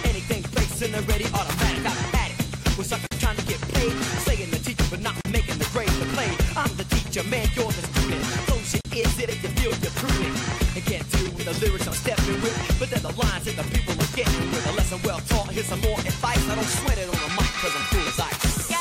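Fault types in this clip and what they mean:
Gap at a join of encoded pieces: separately encoded segments were spliced without trimming each encoder's start-up delay and final-frame padding, so brief silences of about 40 to 45 ms open at 3.07, 5.21 and 8.81 s, smeared at the edges, before the sound resumes where it stopped.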